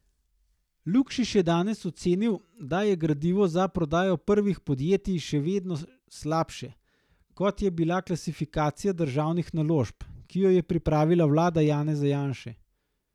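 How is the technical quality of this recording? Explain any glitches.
The speech recording carries no audible technical faults, with the signal holding steady and intact at every point with no glitches to explain.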